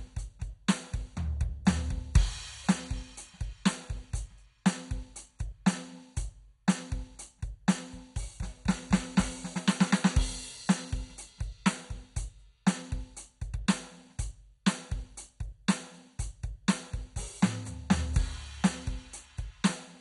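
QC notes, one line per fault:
Throughout, MP2 compression: The music sounds dull, with nothing above 11.2 kHz. Heavy gurgling, granular distortion sits on everything that remains. This is likely MPEG Layer II coding at a low bitrate, and the damage fits roughly 56 kbps. The coder splits the sound into 32 sub-bands and shares out too few bits. Upper bands are shut off entirely, and the bands left are coarsely quantised. That coarse rounding makes the grainy, bubbling texture.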